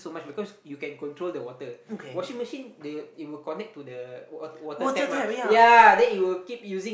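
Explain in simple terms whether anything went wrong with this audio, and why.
Nothing went wrong that I could hear: listening to this speech recording, no problem stood out at any point.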